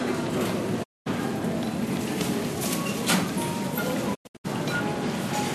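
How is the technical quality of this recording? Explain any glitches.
The recording is marred by two digital broadcast dropouts. From 0.82 to 1.08 s the audio fades out over about 20 ms and stays silent for roughly 216 ms, which fits around nine lost frames. From 4.13 to 4.46 s the loss is broken into several short holes spread over 288 ms, the longest about 96 ms. In both cases the receiver stopped getting valid frames and muted its output until good data returned. The audio that should have filled each gap is gone.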